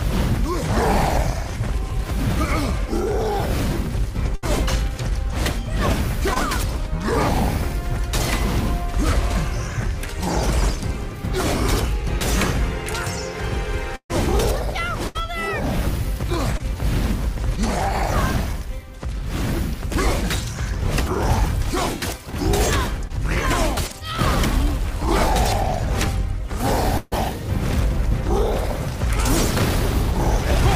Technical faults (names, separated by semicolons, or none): burst of packet loss; short concealed packet loss; repeated packet loss (robotic sound)